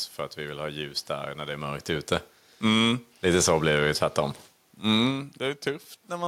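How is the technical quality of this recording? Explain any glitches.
The recording has one technical glitch, an automatic gain falling from 2.51 to 3.93 s, starting just after "det är mörkt ute". Over that span of about 1.4 s, the automatic gain control judged the input either too loud or its background noise too strong for its starting gain, and pulled its gain down by about 4 dB. The speech and the room noise behind it sink together, which is what separates this from the talker's own shifts in distance around 1.5 s and 5 s.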